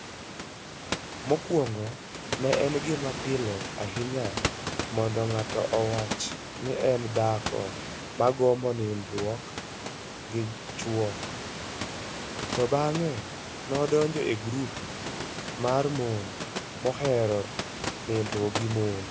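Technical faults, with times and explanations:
The speech carries the usual call microphone processing, with its high-pass filter trimming the lowest bass and nothing above 8 kHz, and room noise sits about 12 dB below the speech, with no technical fault at any point.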